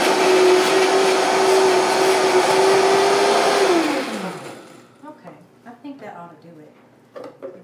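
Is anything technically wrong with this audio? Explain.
No, nothing technically wrong can be heard in this audio.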